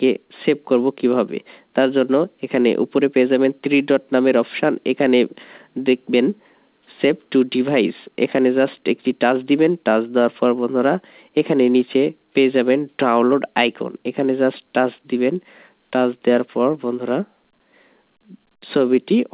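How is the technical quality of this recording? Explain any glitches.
No glitches or faults are audible anywhere here.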